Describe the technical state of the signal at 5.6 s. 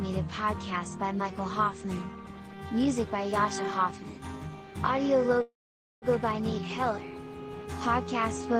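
At 5.6 s a call audio freeze runs from 5.41 to 6.05 s: a brief fading buzz, then about 0.5 s of silence. It is likely from delayed packets, and unlike a dropout, the sound resumes exactly where it stopped.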